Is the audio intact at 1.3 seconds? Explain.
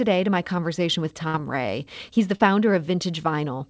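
No. A burst of packet loss runs from 1.28 to 1.36 s, right after "to my conversation with". The receiver filled about 59 ms by stretching the last received sound and fading it, so the last sound is briefly held and fades out. About 60 ms of the speech is missing when it resumes. On a spectrogram, the last frame's pattern repeats as flat horizontal bands that dim before the speech abruptly jumps ahead.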